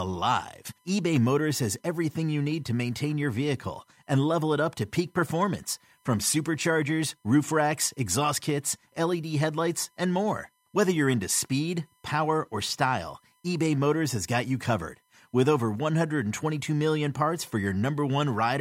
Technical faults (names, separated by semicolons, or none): USB whine